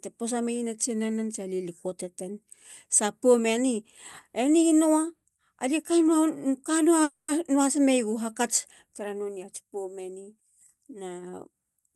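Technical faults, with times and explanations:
7.03–7.30 s, call audio freeze: the sound stalls, the last moment is stretched into a fading buzz or hiss for about 250 ms, ending in roughly 60 ms of silence, then resumes with "meyegu hakats tara nonei". It likely comes from delayed packets draining the jitter buffer. Unlike a loss dropout, nothing is skipped; a gap is inserted.
11.63–11.94 s, jitter buffer speed-up: the sound runs at about 113% speed with its pitch unchanged, as the receiver trims short pitch-period pieces totalling around 50 ms to shrink a backlog. The steady pitch distinguishes it from a resampling or tape-speed error.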